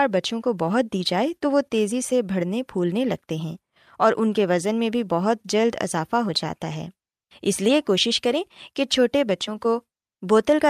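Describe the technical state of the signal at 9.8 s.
At 9.8 s the signal is intact, with no audible fault at that point.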